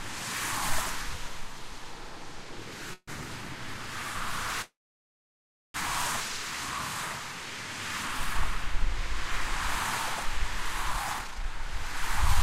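At 2.93 s and again from 4.62 to 5.76 s there is a call audio freeze. The last sound is stretched into a fading buzz or hiss, then silence (about 50 ms the first time, about 1 s the second), and playback resumes where it stopped. Packets were likely held up until the jitter buffer emptied. Unlike a dropout, nothing is lost; a gap is inserted instead.

From 10.93 s to the end, a jitter buffer speed-up runs the audio at about 123% speed, trimming roughly 0.4 s of excess buffered delay through many small pitch-period cuts. The sound hurries forward while its pitch stays unchanged, which distinguishes it from a playback-rate error.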